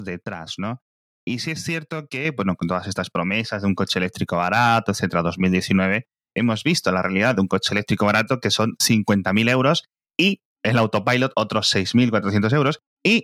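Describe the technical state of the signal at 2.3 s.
At 2.25 s the microphone volume stepped up by about 6 dB in one jump. Software raised the input gain, so speech and background grow louder together, between "sí es cierto" and "bueno con todas estas".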